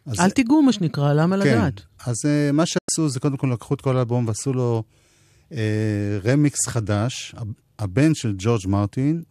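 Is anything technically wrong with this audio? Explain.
Yes. At 2.78 s there is a digital broadcast dropout: the receiver stopped getting valid frames and muted, which fits about four frames being lost. The speech fades out over 8 ms, leaving a 96 ms silent hole before sound returns at 2.89 s.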